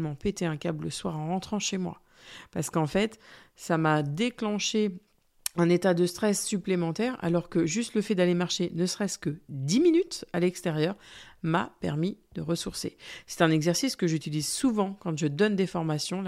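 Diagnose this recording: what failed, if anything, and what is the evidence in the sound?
No fault to diagnose.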